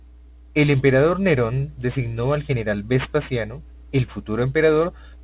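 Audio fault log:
throughout aliasing: speech resampled to an 8 kHz rate without filtering first, so energy above 4 kHz folds back as gritty, metallic sibilants, at roughly 20 dB below the signal.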